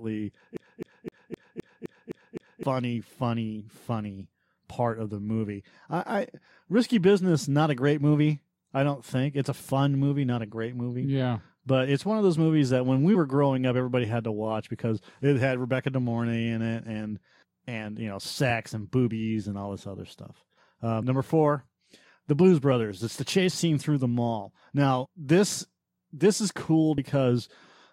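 From 0.57 to 2.63 s the speech is caught in a CD stuck on one turn: a scratch keeps throwing the laser back, so a 258 ms slice repeats eight times with a brief mute at each jump before "funny funny part of". On a waveform this looks like identical blocks tiled evenly, and a spectrogram shows the same pattern copied at regular intervals.

Compressed frames skipped, where whole coded frames went missing or were rejected as damaged, occur at 9.59, 13.14, 18.49, 21.01 (between "all this other stuff" and "number four"), 22.71, 25.04 (between "scene through the mall" and "this this is cool") and 26.98 s. Each jumps ahead by one to three frames, a few tens of milliseconds.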